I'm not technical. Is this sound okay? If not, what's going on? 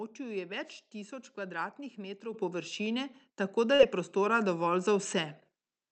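No, there are four separate glitches in this speech clip.

From 0.63 to 0.80 s, just before "tisoč kvadratnih", there's a wireless microphone noise hit: the radio link briefly fades, so you hear a quick swish of static.

At 2.34 s, between "tisoč kvadratnih" and "površine tako", and again at 3.36 s, the microphone volume stepped up: the call software boosted the mic, so voice and background suddenly get louder together.

Around 3.75 to 3.81 s, between "površine tako" and "je prostora dovolj", there's a short concealed packet loss. A tiny bit of audio went missing and got patched over, leaving a brief smear.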